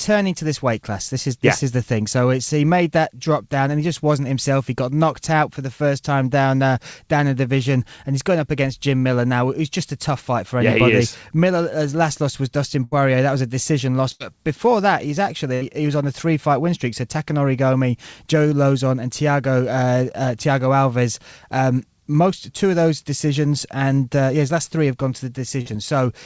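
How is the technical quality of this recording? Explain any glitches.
The recording went through a call link and has four dropouts, three longer and one brief. The band stops at 8 kHz, which points to a wideband call codec.

Three bursts of packet loss occur at 12.84–12.94 s, at 14.12–14.22 s (after "was a decision loss", before "before that he's"), and at 15.54–15.63 s (after "before that he's", before "he was on a"). In each, roughly 80 ms of audio never arrived in time. The receiver stretched the last sound for about 73–83 ms as a fading buzz or hiss, and then the speech picks up further along with a chunk skipped. That skip sets them apart from the briefer fault.

A short concealed packet loss at 25.61–25.67 s, just after "three have gone to", dropped about 40 ms. The receiver filled it by continuing the preceding sound for a few hundredths of a second and blending back. The result is a quick smear or wobble.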